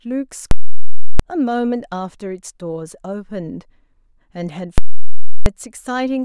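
At 0.51 s a loud pop hits, then silence until another pop at 1.20 s. This is invalid numbers at full scale. A calculation produced infinite or invalid values, pinning the output at one extreme value for about 0.68 s. That fits a 16384-sample block. The same happens from 4.78 s to 5.46 s.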